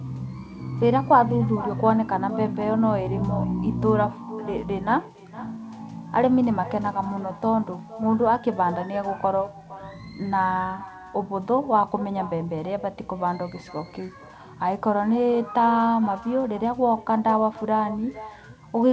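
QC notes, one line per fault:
throughout: echo with no canceller. The far end plays the call through a loudspeaker, its microphone picks it up, and nothing strips it out, so every phrase returns roughly half a second later, about 18 dB quieter, as a thin shadow.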